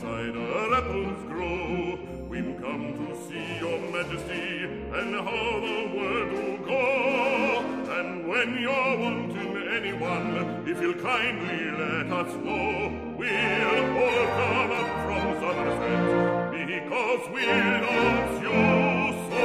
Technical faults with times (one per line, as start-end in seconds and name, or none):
14.75-14.78 Bluetooth stutter